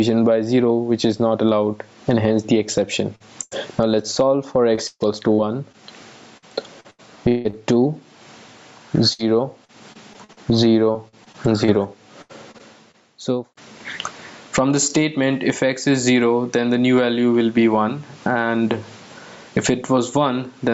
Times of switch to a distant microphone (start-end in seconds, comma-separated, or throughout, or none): none